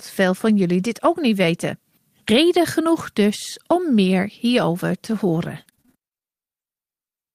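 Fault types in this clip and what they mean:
repeated packet loss (robotic sound): just after "hierover te", from 5.41 to 6.24 s, the speech turns choppy as nine short dropouts, none longer than 25 ms, get patched by stretching the last bit of sound, so about a fifth of that stretch is filled-in guesswork.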